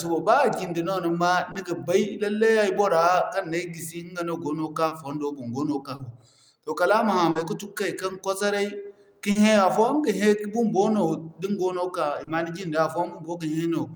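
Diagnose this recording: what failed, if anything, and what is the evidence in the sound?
The network stage failed, causing short concealed packet loss. Brief smears occur at 1.51, 4.87, 5.95, 7.31, 9.31 and 12.23 s. Each time, 40 ms of speech arrived too late or never. The decoder extended the preceding sound to cover it, then blended back.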